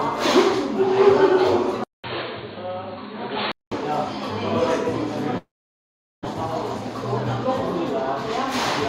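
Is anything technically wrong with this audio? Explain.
Yes. Three faults are present.

From 1.84 to 3.72 s, the sound turns dull and boxy. Nothing remains above 4.4 kHz. A 200 ms silence marks the switch. The level drops a few decibels, and new background noise sits well below the signal. The likely cause is an input switched to a poorer device.

From 5.37 to 6.27 s, a long network dropout is likely. A short fading buzz continues the last sound. Then about 0.77 s of silence follows. When the audio returns, roughly 0.6 s of it is gone for good.

From 6.34 to 8.53 s, a jitter buffer speed-up occurs. The receiver trims many tiny pitch-period pieces to reduce a backlog. The audio runs at 104% speed. Pitch stays the same. About a tenth of a second is removed.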